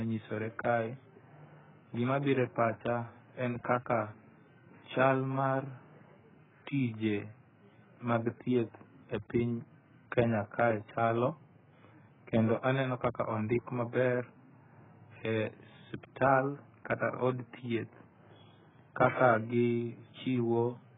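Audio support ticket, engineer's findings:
Dull, band-limited speech throughout, nothing above 3.8 kHz, plus warbly, smeared texture on vowels and fizzy sibilants. Likely AAC compression, AAC-LC squeezed hard: encoder dropping the cut-off and starving bands. Damage this heavy fits a bitrate down around 8 kbps.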